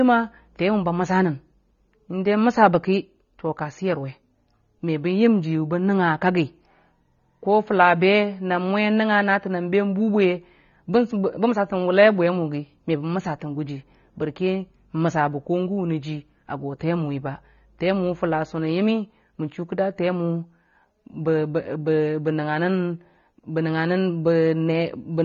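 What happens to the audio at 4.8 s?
At 4.8 s there's AAC compression, and it runs through the whole clip, likely AAC-LC squeezed to something like 24 kbps. With too few bits, the coder discards everything above 6.9 kHz and thins what's left, so the speech sounds dull and smeared, with a warbling or fizzy texture.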